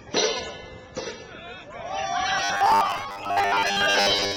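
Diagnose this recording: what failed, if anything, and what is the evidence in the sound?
The driver or buffer stage likely starved, with the playback software looping a short buffer in place of missing audio. From 2.38 s to the end, the sound becomes a rigid, metallic robotic buzz from repeated short buffers, fixed at 100 Hz (a 10 ms loop), with roughly 70% of the material repeated.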